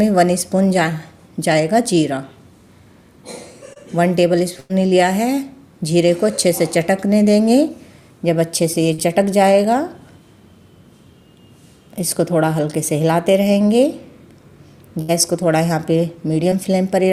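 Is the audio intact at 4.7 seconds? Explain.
No. At 4.7 seconds the sound is inside a burst of packet loss from 4.60 to 4.71 s. The last sound before the gap is held and gradually turned down, giving a sustained buzz or fading hiss, and then the audio jumps ahead. A short run of packets was lost or arrived too late, so the receiver filled about 98 ms by extending what it had, and about 100 ms of the original audio is missing.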